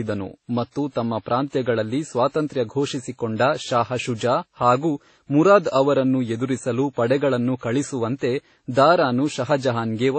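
Throughout this speech clip the sound is dull, with nothing above about 8.3 kHz, and smeared, with several layers of swirling, watery artefacts stacked together. This likely comes from transcoding between lossy codecs, with low-bitrate MP3, AAC and finally WMA passes compounding each other's damage.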